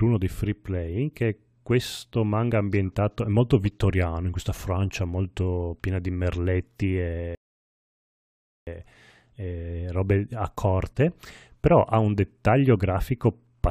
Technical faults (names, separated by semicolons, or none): rebuffering stall